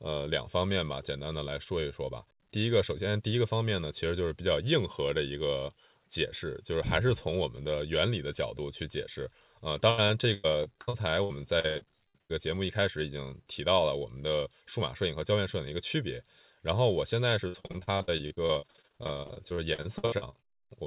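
From 9.9 to 12.32 s and again from 17.48 to 20.7 s the speech breaks into repeated packet loss (robotic sound): many short holes, up to 100 ms and 64 ms, patched by stretching the last sound. About a third of each span is concealed, heard as choppy sound with pieces missing rather than clean silent dropouts, over a call-band G.711 path that carries nothing above 4 kHz.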